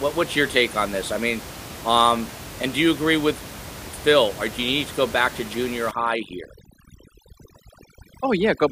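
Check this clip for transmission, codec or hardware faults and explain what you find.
One fault is present: overdone noise removal, from 5.91 s to the end of the clip. The background drops and breaks up into twinkling specks. A noise reducer set too aggressively is cutting individual frequency bands whenever they approach its noise estimate, taking softer parts of the speech with them. Before that point, room noise sits about 15 dB below the speech.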